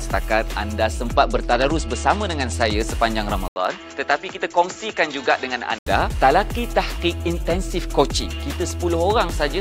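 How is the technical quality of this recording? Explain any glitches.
The recording has two clear glitches, both short and both recovering.

From 1.16 to 2.73 s there is a Bluetooth SBC bit pool drop. When the wireless link gets congested, the encoder spends far fewer bits per frame. The highest sub-bands are starved and the rest are quantised coarsely. The treble goes dull and a gritty, grainy noise rides on the sound. The degree of loss suggests the bit pool falling from about 28 to 11, roughly 90 kbps. On a spectrogram the upper bands thin out or vanish in blocky patches, with speckled noise below, until full bandwidth returns.

From 3.48 to 5.87 s the sound abruptly turns dull and boxy, about 5 dB quieter, with a different hiss sitting around 45 dB below the signal. It then clears again at the end. The likely cause is the input switching to a poorer device, such as another microphone or a headset's call profile, which passes a narrower band. 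A spectrogram shows a hard ceiling with nothing above 7.6 kHz for that stretch. The waveform shows an 80 ms gap at the switch and a lower envelope afterwards.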